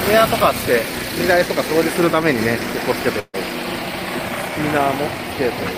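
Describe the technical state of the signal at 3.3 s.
At 3.3 s the signal sits inside a burst of packet loss running from 3.19 to 3.35 s: about 140 ms of audio never arrived, so the receiver stretched the last sound and faded it, reaching silence for its final 40 ms. Unlike a simple dropout, the sound then resumes further along, with that stretch skipped.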